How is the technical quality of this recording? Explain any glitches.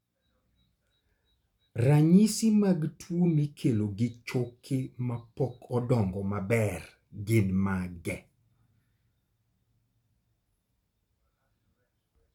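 Nothing here stands out as a glitch: the speech runs along without any dropouts, clicks or other technical hiccups to point to.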